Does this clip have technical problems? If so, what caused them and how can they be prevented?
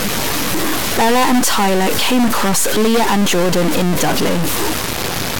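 Yes. A harsh, buzzy distortion runs through the whole speech clip, and the pauses are filled with loud noise. This is likely a stuck bit in a high position, with an error step around -10 dBFS. Unlike clipping, it corrupts quiet passages and silence too, not only peaks. To prevent it, check converter wiring and data lines, and test the signal chain with a low-level tone before recording.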